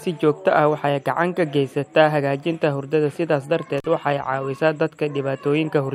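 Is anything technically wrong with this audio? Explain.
Yes. From 3.78 to 3.86 s the speech shows an intermittent contact fault: a loose plug or cable connection briefly separates, so the signal path opens for about 41 ms. The sound drops out abruptly, with crackle at both edges and faint hiss during the gap.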